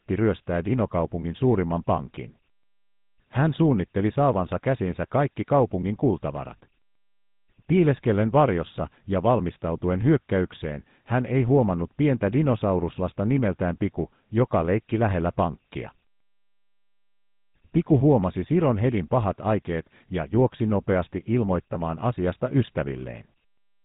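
From the first second to the last, the speech carries the sound of the GSM full-rate codec, the original mobile phone coder. It rebuilds the voice from a vocal-tract model driven by a sparse, regularly spaced pulse excitation, which fits a rate of about 13 kbps. The damage is plainly audible: a buzzy, gravelly roughness sits on the voice, and everything above about 3.8 kHz is gone, so it sounds dull and boxed in.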